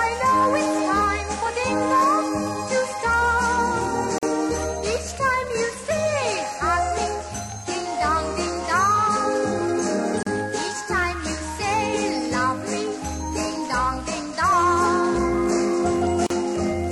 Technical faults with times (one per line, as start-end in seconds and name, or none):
4.18-4.23 gap at a join of encoded pieces
10.23-10.27 gap at a join of encoded pieces
16.27-16.30 gap at a join of encoded pieces